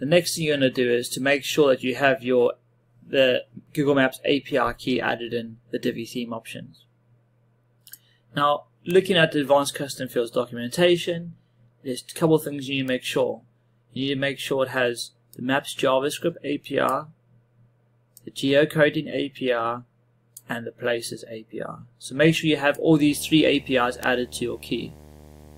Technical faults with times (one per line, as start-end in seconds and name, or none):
8.91 bit error spike
12.88 bit error spike
22.36 bit error spike
23.03-25.57 video or display buzz
24.03 bit error spike